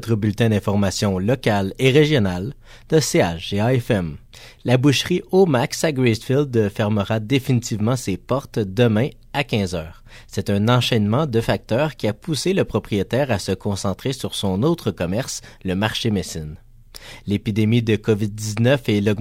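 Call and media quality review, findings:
No faults found: signal level, continuity and timing hold steady throughout, with nothing traceable to capture, processing or transport.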